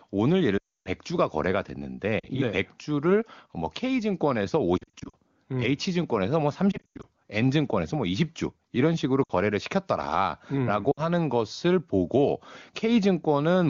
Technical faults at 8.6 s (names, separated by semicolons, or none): none